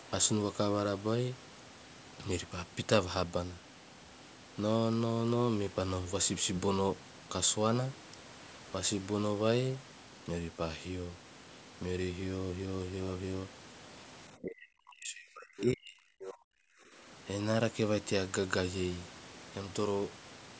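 From 14.36 to 17.06 s, the talker's speech is suppressed in double talk. The level sinks and recovers in pieces. At its deepest it drops by about 40 dB, close to silence. Altogether around three seconds are affected. The likely cause is that the far side spoke at the same moment. The echo canceller could not tell the talker from its own loudspeaker echo, so it turned everything down.

Inside that stretch, from 16.2 to 16.34 s, the other side's voice leaks through. It is a brief scrap of a second voice. It sits about 15 dB below the talker's level. The likely cause is loudspeaker playback on the talker's device reaching the microphone. The echo canceller did not fully remove it, so a short fragment slips into the recording.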